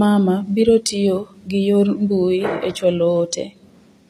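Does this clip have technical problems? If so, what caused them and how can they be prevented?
Yes. Throughout the speech, the treble sounds synthetic, with s sounds turning gritty and lispy, and nothing is present above 14.9 kHz. This is likely HE-AAC compression at a low bitrate, around 24 kbps, where the upper band is rebuilt by copying lower harmonics upward rather than coded directly. Encoding at a higher bitrate, or with plain AAC, prevents it.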